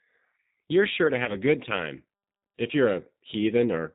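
G.729 codec coding runs through the whole clip: the speech is rebuilt at 8 kbit/s from a vocal tract filter, pitch predictor and a few pulses per frame, so nothing above 4 kHz survives and the voice sounds plainly rough, narrow and synthetic.

VoIP packet loss concealed by the speech codec occurs from 1.25 to 1.36 s, between "sure to" and "a good time if". About 20 ms of audio went missing, which fits a single lost packet. The decoder extended its last pitch and filter state with falling gain, giving a brief smear of buzzy tone or coloured noise, and the sound stays weak or distorted until the predictor recovers.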